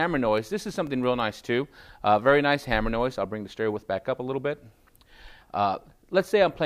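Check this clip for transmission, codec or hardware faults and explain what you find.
There's one fault here: CD scratch ticks, seven of them between 0.38 and 1.36 s, about seven a second. A scratch wipes out more data than error correction can rebuild on each disc turn, so the player patches or mutes a brief stretch, each tick about a millisecond at most.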